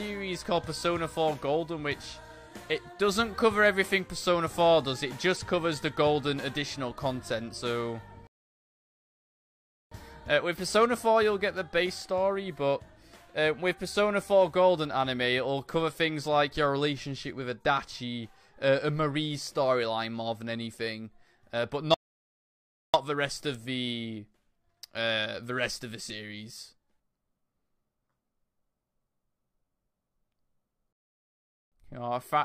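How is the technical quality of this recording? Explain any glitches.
The recording has three playback interruptions, all rebuffering stalls. At 8.27 to 9.91 s, 21.94 to 22.94 s and 30.93 to 31.72 s, the sound halts into silence for about 1.6, 1.0 and 0.8 s while the player waits for more downloaded audio, then continues exactly where it paused. Unlike a dropout, nothing is skipped; the gaps only add time.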